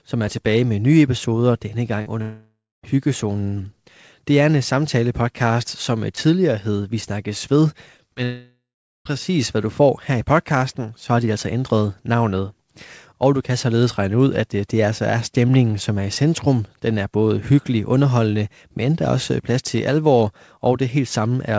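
At 2.02 s a short concealed packet loss leaves about 40 ms missing. The decoder extends the preceding sound across the gap, heard as a brief smear. From 2.22 to 2.85 s a long network dropout is the likely cause: the sound decays into a fading buzz or hiss, then about 240 ms of silence before the audio resumes with a section missing. At 6.15 s a repeated buffer plays a 10 ms block two extra times, a short buzzing stutter, with around 20 ms of audio lost. Two more short concealed losses at 7.97 s and 8.14 s each drop 20 ms and show up as quick wobbles. A second likely long network dropout follows from 8.24 to 9.07 s, fading to about 420 ms of silence. Throughout, the G.722 call path shows in the complete absence of content above 8 kHz.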